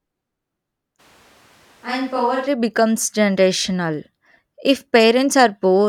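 A speech recording in which the close microphone's feed likely dropped out from 1.01 to 2.45 s, leaving a distant microphone as the only source for that stretch. A switch to a distant microphone like this makes the speech abruptly roomy and hollow, thinner in the bass and roughly 5 dB quieter, while background room noise rises to sit only about 30 dB below the speech. The change is sudden at both ends, snapping back to close, full sound at 2.45 s.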